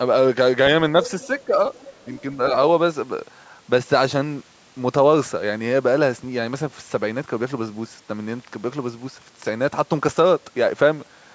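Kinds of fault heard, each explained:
Other side's voice leaking through: a faint second voice, well below the main speech, sits at 1.06–1.44 s and, quieter still, at 1.74–2.22 s. It is likely residual loudspeaker echo and appears as weak extra harmonic traces on the spectrogram.
Speech suppressed in double talk: from 1.45 to 1.53 s the speech briefly dips by about 10 dB. The waveform shows a short notch in amplitude, and the spectrogram shows a momentary fading across the band.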